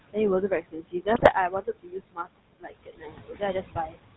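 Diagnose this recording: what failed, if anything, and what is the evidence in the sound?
The call-processing stage has a noise suppressor working hard throughout. The room noise, sitting about 13 dB under the speech, gets pulled down by about 20 dB between phrases and swells back under them.

That same noise suppressor is also eating speech between 0.49 and 3.97 s. Quiet stretches totalling about a second and a half get treated as background and dropped by up to about 22 dB, so softer consonants and tails sound swallowed or faint.

At the codec stage there's GSM full-rate coding on everything. There's that gravelly, buzzy roughness from pulse-driven excitation, plainly audible, and nothing above 4 kHz. The character fits the 13 kbps full-rate codec.

GSM bit errors show up on the network side from 1.15 to 1.32 s. There's a burst of squawky, gargled breakup where corrupted filter, pitch and gain values hit the decoder. 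It sounds like a weak radio link flipping bits across roughly seven 20 ms frames.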